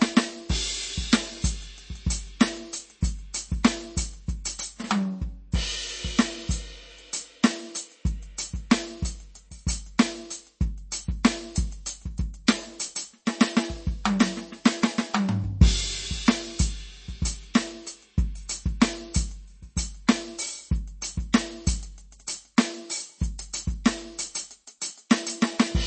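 Right through the music there's plain MP3 compression damage, likely from a very low bitrate around 32 kbps: nothing above 8.3 kHz, with a watery, swirly texture. Near 25.1 s comes pre-echo, where codec noise spreads about 11 ms ahead of a sharp attack, giving a brief hiss and a softened hit.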